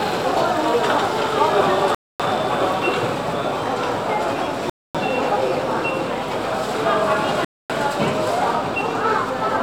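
The audio was played back in 2.5 s chunks with 250 ms of silence between them, leaving a gap between chunks at 1.95–2.20 s, 4.70–4.95 s and 7.45–7.70 s.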